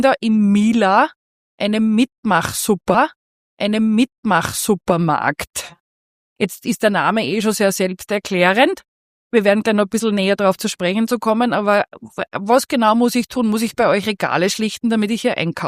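A stream segment repeated from 2.94 to 4.94 s: the player queued the same 2-second segment twice, so that stretch of audio replays after a small blip.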